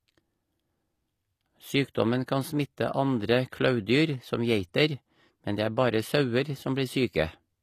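Throughout, the s sounds turn gritty and metallic, with nothing above 14.9 kHz. Likely HE-AAC compression, rebuilding treble from copied lower bands at about 24 kbps.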